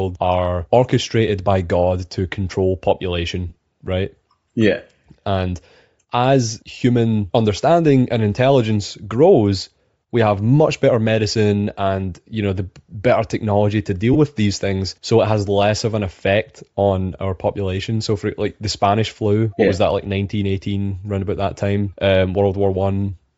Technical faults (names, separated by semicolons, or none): Bluetooth LC3 compression; lost LE Audio frames